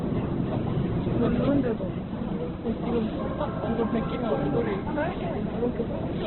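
From start to finish the audio is dull and boxed-in, with nothing above 4.2 kHz, and its tones turn rough, grainy and hissy. This is likely heavy Opus compression in its CELT music mode, consistent with a narrowband stream at around 8 kbps.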